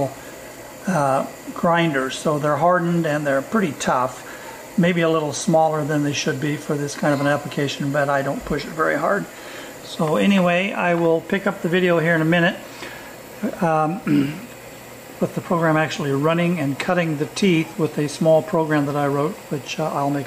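No technical faults can be heard anywhere in the recording; the signal stays continuous and steady throughout.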